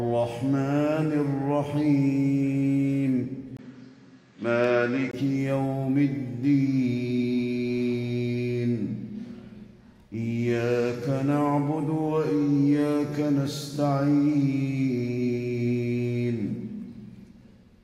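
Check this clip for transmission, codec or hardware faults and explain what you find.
One fault is present. From 3.57 s to 5.13 s, the input likely switched to a poorer device. A 20 ms gap marks the change. Nothing above 8.5 kHz passes, so the sound turns duller. A faint new noise floor appears, roughly 45 dB down, with no clear level change.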